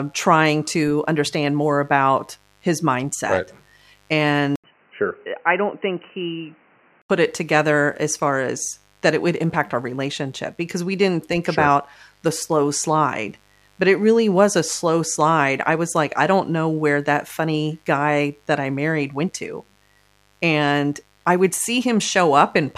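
A mains buzz runs through the whole speech clip. Switching spikes from the 50 Hz supply leak in twice per cycle, so harmonics stack up into a raspy, steady drone. It sits faint, roughly 40 dB under the speech.

At 4.56 s the sound drops out for 80 ms. It returns dull and boxy, with nothing above 3 kHz. It is quieter by roughly 5 dB, over a new noise about 35 dB down. At 7.1 s it clears again. This is likely an input switched to a poorer device.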